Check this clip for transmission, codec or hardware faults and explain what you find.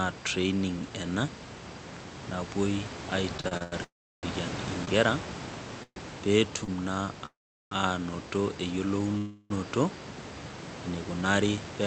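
The speech has network-timing faults: a stutter, four freezes, two brief stalls and a final speed-up, with nothing lost in the stalls and freezes.

Repeated stalls (stutter), 3.37–3.74 s: the jitter buffer ran dry five times, longest 93 ms, so the receiver stretched the last sound over 206 ms, making the speech drag.

Call audio freeze at 3.84–4.25 s, 5.83–5.98 s, 7.26–7.73 s and 9.17–9.52 s: each pause lasts 130–455 ms, with a fading continuation dropping to silence (330, 50, 390 ms) in all but the last. The likely cause is held-up packets.

Short stall from a late packet at 4.85–4.89 s and 6.64–6.70 s: the receiver held the last sound 22 and 37 ms for a tardy packet, producing a slight buzz or dip.

Jitter buffer speed-up, 11.50–11.79 s: the receiver trimmed about 50 ms of pitch periods to shed accumulated delay, so the speech runs at 113% with pitch unchanged.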